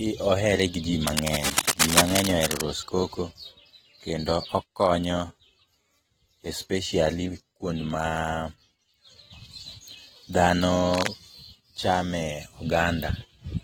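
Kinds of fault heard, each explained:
AAC compression: The speech sounds dull and smeared, with plainly audible codec damage and a warbling, fizzy texture on sustained sounds and sibilants. This is likely low-bitrate AAC-LC, around 27 kbps, quantising frequency lines so coarsely that the spectrum thins out and breaks up.
cable scratch noise: Dense, uneven bursts of scratching and rustling ride over the speech, first right after "ohere gi ji" at roughly the same level as the speech, then briefly and a little lower. This likely comes from a worn cable or connector whose contact resistance jumped while moved.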